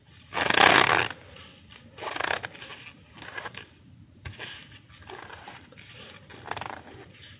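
Nothing's wrong with this recording of sounds; it just has the narrow, phone-like sound of a call, with nothing above about 4 kHz, as a G.711 call link normally gives.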